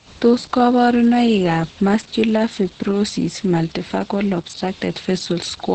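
From start to finish, the speech carries heavy Opus voice compression. Nothing reaches above 8.6 kHz, and the SILK coder's coarse excitation makes it hoarse and slightly robotic, pointing to about 10 kbps. A plain low-pass would only dull the sound without this grainy buzz.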